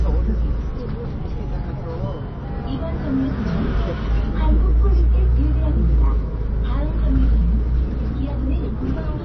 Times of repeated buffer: none

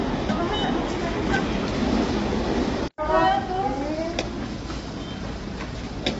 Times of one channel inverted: none

